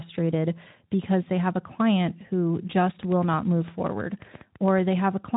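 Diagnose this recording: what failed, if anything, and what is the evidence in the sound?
Likely interference pickup in the analogue wiring injects a train of clicks from 3.03 to 4.94 s, after "a client who just": roughly 15 irregular pops, near 7 per second, peaking around 10 dB above the speech.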